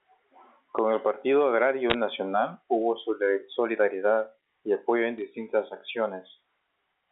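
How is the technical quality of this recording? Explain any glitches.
The recording has brief digital line glitches, heard over the narrow band of a G.711 mu-law telephone path that passes nothing above about 3.6 kHz. Bit errors on a digital phone line at 1.9 to 1.94 s and again at 5.18 s flip individual bits in the coded samples, roughly one in a few hundred. A sample hit on a high bit or its sign jumps abruptly, producing short sharp ticks and a crackle over the speech.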